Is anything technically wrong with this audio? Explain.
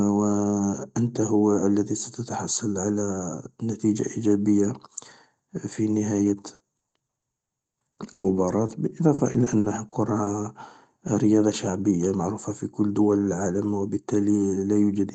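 Yes. From 6.17 to 10.44 s the speech has repeated packet loss, which gives it a robotic sound. Dozens of short holes arrive in quick succession, the longest about 120 ms, and together they cover roughly a fifth of that stretch. The receiver fills each hole by stretching the last bit of sound it had, so the speech turns choppy and robotic. On a waveform the stretch looks chopped up. On a spectrogram the harmonics freeze into flat, smeared bands below the call codec's 8 kHz ceiling.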